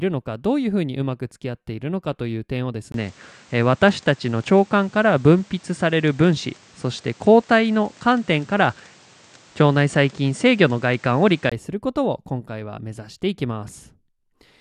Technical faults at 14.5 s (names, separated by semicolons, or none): none